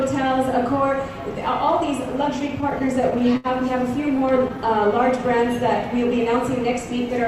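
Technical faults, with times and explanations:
2.39 to 3.47 s, repeated stalls (stutter): the sound drags and catches eleven times, the longest hold about 71 ms, about 166 ms held in all. Packets arrived late, the jitter buffer kept running dry, and each wait was bridged by continuing the last sound, faded on longer waits, so nothing is lost but timing slips.
4.08 to 4.70 s, repeated stalls (stutter): seven brief catches, none longer than 12 ms, totalling 69 ms, with the same late-arrival, buffer-empty cause.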